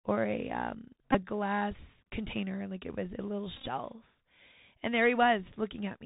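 Bluetooth CVSD headset codec runs throughout: the speech is squeezed through a one-bit, 64 kbps narrowband path with nothing above 4 kHz, leaving scratchy sibilants and granular hiss. Bluetooth headset packet repeats come at 1.13–1.16 s, where about 19 ms of lost audio is refilled with replayed packet data (which points to roughly five packets), and at 3.57–3.68 s, where about 64 ms is lost in bursts scattered over roughly 100 ms. The longest run is around 20 ms, and repeats every 3.75 ms give brief buzzes near 267 Hz.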